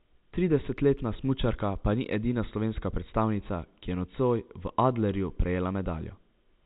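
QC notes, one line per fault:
Nothing stood out on listening to this speech clip, which carries the narrow band of ordinary telephone audio.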